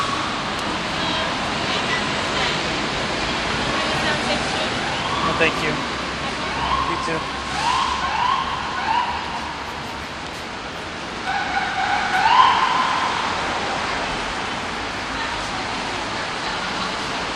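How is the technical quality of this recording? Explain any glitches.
The recording has two small dropouts where compressed frames were skipped. At 6.74 s and again at 11.84 s, the audio jumps forward, losing roughly 70 ms the first time and about 150 ms the second. That points to a few frames, then a handful more, going missing or being rejected by the decoder.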